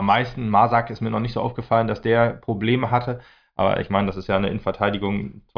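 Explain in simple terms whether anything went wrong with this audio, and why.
Nothing went wrong; no faults can be heard.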